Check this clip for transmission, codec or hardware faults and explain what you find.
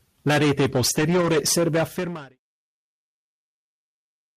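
Two faults are present. Hard clipping runs through the whole speech clip, and a stretch of lost packets was rebuilt from error correction.

Hard clipping is present from start to end. The signal is driven about 15 dB past the limit of one stage in the chain. Roughly a fifth of the samples go over it. The peaks are sliced flat. Those flat tops create harmonics high in the spectrum. The result is a harsh, constant fuzz on every loud syllable, not just an occasional crackle.

Lost packets rebuilt from error correction occur from 0.65 to 1.35 s, ending just before "serve a fermare il". Packets in this span were lost, but each following packet carried a low-bitrate copy. The decoder played those copies instead of leaving silence. About 360 ms of the audio is rebuilt this way, spread across the span. There is no gap. Those moments sound rougher and noisier. The smooth fade-out from about 1.5 s to 2.39 s is ordinary editing, not a fault.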